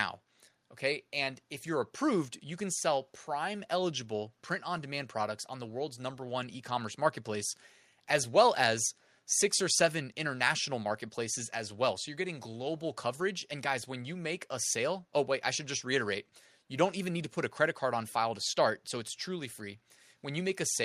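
No technical faults can be heard anywhere in the clip, so there are none to describe in time order.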